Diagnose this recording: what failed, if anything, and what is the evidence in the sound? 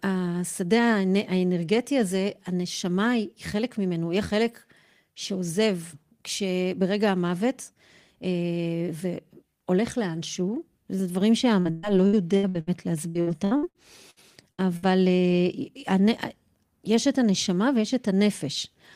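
Repeated packet loss (robotic sound) at the network stage, from 11.59 to 12.70 s and again from 13.09 to 14.85 s. Holes of up to 118 ms and 62 ms are patched by stretching the last sound, giving choppy speech. A single dropout or clean muting would leave one gap or silence instead.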